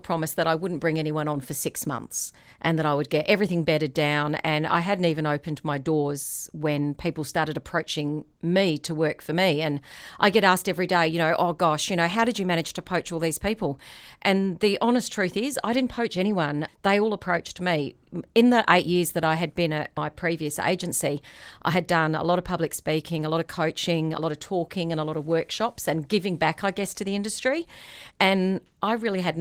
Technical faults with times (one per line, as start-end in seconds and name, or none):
none